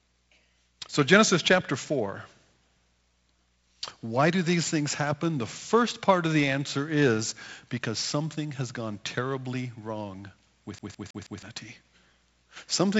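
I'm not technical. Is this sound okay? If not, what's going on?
No. Right after "gone terribly wrong with", from about 10.79 to 11.43 s, the speech gets caught in a loop, like a CD stuck on one turn. A scratch on a disc keeps knocking the player back to the same spot, so the same sixth of a second plays four times over, with a tiny gap at each jump. That gives the quick, even stutter you'd know from a skipping CD player. It comes through a wideband telephone link, G.722.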